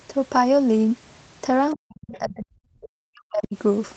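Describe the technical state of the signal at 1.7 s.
Right at 1.71 s there's a brief scrap of the other side's voice leaking through, lasting until 1.75 s. It's faint, around 25 dB under the talker, and likely comes from the loudspeaker playback getting past the echo canceller into the microphone.

Straight after, from 1.75 to 3.56 s, the speech is suppressed in double talk. The talker's level dips, bottoming out around 40 dB down, likely because the canceller couldn't separate it from the echo and turned everything down.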